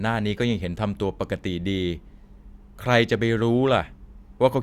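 A short recording of speech, with nothing technically wrong to report. No faults can be heard anywhere in it.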